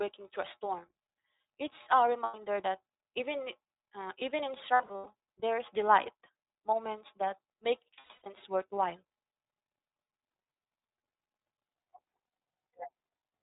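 iLBC codec coding runs through the whole speech clip: each 20 ms frame's excitation is coded on its own at a rate that fits 15.2 kbps, so nothing above 4 kHz survives and the voice sounds plainly rough and synthetic throughout.

Lost iLBC frames occur at 2.24–2.36 s, 4.74–5.08 s and 7.94–8.27 s. The first is a single 100 ms gap, and the later two are about 240 and 260 ms of scattered losses, each run no longer than around a tenth of a second. The decoder repeats the last pitch cycle mixed with noise, so each gap sounds like a held, buzzy, breathy vowel, and the voice recovers almost immediately afterwards.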